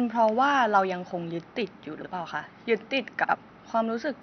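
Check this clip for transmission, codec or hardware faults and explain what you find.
Two transmission faults: frames out of order at 2.01–2.07 s and 3.23–3.35 s. In each, two neighbouring runs of frames were decoded in swapped order, one frame per run in the first event and two in the second. The 26.1 ms frame length points to MP3-style frames. Each stretch is a brief garbled flutter. Unlike a dropout or skip, nothing goes missing and the timing holds. The faint room noise, about 47 dB below the speech, is part of the recording.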